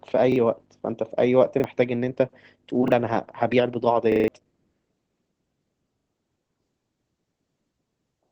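Throughout this speech clip the voice sounds muffled and a little hoarse, with a faintly robotic edge and nothing at all above about 8.8 kHz. That is Opus voice compression at about 12 kbps. The SILK linear-prediction coder is working in wideband at that low rate, so the top of the spectrum is cut away and the excitation is coded coarsely enough to be plainly audible. The speech also stutters at five points, where a short slice plays again with a hard join. At 0.32 s, 1.6 s and 2.88 s one 40 ms piece sounds twice. From 4.12 to 4.28 s it repeats four more times as a longer stutter, swallowing roughly 150 ms of speech. From 6.0 to 6.08 s it repeats twice more, losing about 70 ms. These are repeated buffers, which fit a 40 ms buffer. New audio arrived late each time, so the device replayed the last block it held.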